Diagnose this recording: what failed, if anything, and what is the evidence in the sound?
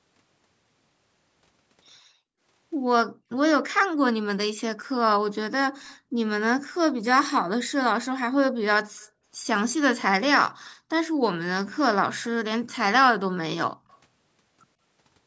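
The call's echo canceller, part of the call processing stage, clamped the microphone hard while the far end was playing. This gated the background: the room sound collapses by about 40 dB in brief dips at 3.13 to 3.24 s and 8.46 to 8.55 s, then returns once the canceller releases.

At the loudspeaker end of the call, echo cancellation likely left part of the microphone pickup uncancelled, causing an echo leak. Faint delayed copies of the speech, roughly 35 dB below it, trail the original by 144 ms at 8.96 to 9.09 s and by 147 ms at 13.88 to 13.98 s.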